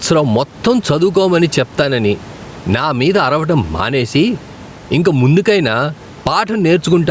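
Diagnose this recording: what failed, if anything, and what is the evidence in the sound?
Gain pumping, throughout the clip: the level swings around 10 dB. The likely cause is microphone gain set far too high, so a fast limiter clamps each peak and squashes the dynamics.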